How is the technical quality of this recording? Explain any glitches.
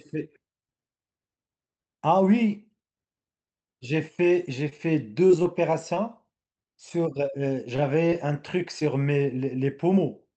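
The speech carries audible glitches from lost packets on a call link, and the top end stops near 8 kHz, which points to Opus call coding at around 40 kbps.

From 4.69 to 8.14 s there are brief ticks, smears and small hiccups scattered through the speech. These are scattered short gaps: roughly ten packets arrived lost or late, none longer than about 20 ms, and the receiver patched each one by extending the preceding sound. The patches cover around 5% of that stretch.

At 8.80 to 8.83 s a short smear or wobble briefly blurs the speech. This is short concealed packet loss: about 20 ms never reached the decoder in time, so the receiver synthesised roughly 15 ms by continuing the last sound and then blended back into the real signal.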